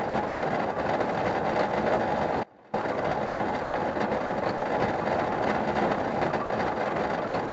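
Between 0.10 and 0.42 s the sound breaks up, with about 180 ms swapped for steady synthetic hiss. This is likely sound chopped by the voice detector, which repeatedly stopped sending and let comfort noise fill the holes.

From 2.43 to 2.73 s the sound cuts off abruptly for 300 ms, leaving only a faint remnant roughly 25 dB down. This is likely an audio dropout to a faint residue: the signal was lost while the path stayed live.

From 3.26 to 3.74 s the sound is chopped again, with 240 ms replaced by comfort noise, likely from the same on-off switching by the voice detector.

Brief 40 ms gaps filled with steady noise appear at 4.26, 4.58 and 6.46 s. Each is likely sound dropped by the voice detector: the detector mistook that material for background, stopped sending, and the receiver played comfort noise until it triggered again.

From 7.28 s to the end, the sound chops once more, with 111 ms replaced by comfort noise, likely from the voice detector cutting in and out.

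Throughout, nothing is heard above 8 kHz, which fits a call path using G.722 at 64 kbps.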